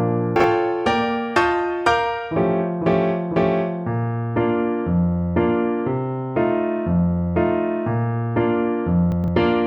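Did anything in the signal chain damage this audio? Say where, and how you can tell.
Yes, chunks out of order at the buffer stage: at 0.36–0.44 s one 40 ms chunk plays a chunk late, and at 9.12–9.28 s one plays three chunks late. Each shows as jumbled sound, and the waveform has three hard vertical joins where the segments are swapped.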